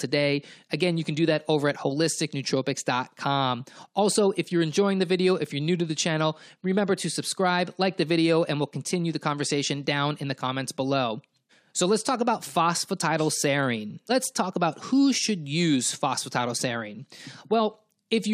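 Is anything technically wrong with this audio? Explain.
No, nothing technical stands out here; the recording holds together without any problems I can pick out.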